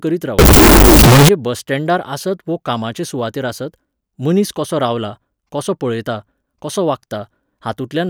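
Between 0.39 and 1.29 s in this speech clip, the samples were likely stored as 32-bit float but interpreted as 32-bit integers, a float read as integer fault. Because the sign and exponent bits then dominate each value, the waveform collapses into a near-square shape at an almost fixed, high level. That span turns very loud and harsh, background noise rises to the level of the speech, yet the pitch contour stays traceable, clearing just before "बस स्टँडार आसत वो".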